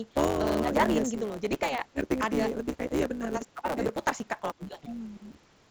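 From start to finish the speech has a block size mismatch (truncated). One stage writes longer blocks than the next reads, so the tail of every block is dropped. That gives a steady buzz at about 138 Hz, the block rate, and the speech runs about 1.6 times fast with its timbre intact, which fits 512-sample blocks cut to about 320. A spectrogram shows a fine comb of vertical seams every 7.2 ms, and the waveform has a hard jump at each one. The call microphone processing takes out the lowest bass, which is normal.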